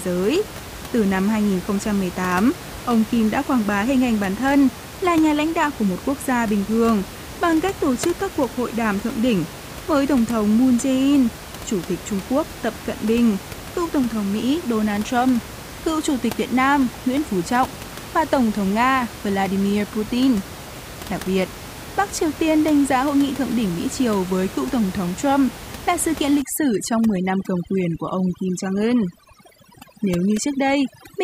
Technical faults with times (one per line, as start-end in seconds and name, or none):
26.42-31.23 overdone noise removal